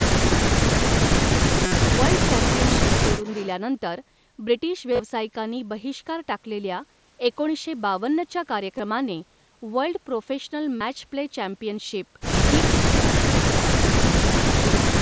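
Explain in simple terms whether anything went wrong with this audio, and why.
Speech suppressed in double talk cuts the talker's voice sharply, nearly to silence, at 0.02–1.18 s, 1.34–1.49 s, 12.77–13.02 s, 13.18–14.36 s and 14.52–14.78 s. The likely cause is that both sides spoke at once, and the echo canceller turned down everything it could not separate.

Concealed Bluetooth headset packet loss appears at 1.66–1.72 s, 4.92–5.02 s, 8.78 s and 10.77–10.81 s. Short bursts of audio between headset and phone went missing, about 50 ms in the first case, and the receiver filled each gap by repeating the most recent sound.

An echo leak shows up at 3.24–3.49 s as a faint, delayed copy of the voice, arriving about a third of a second after the original. It likely comes from a loudspeaker on the far end whose echo canceller let some of its own playback slip back into the call.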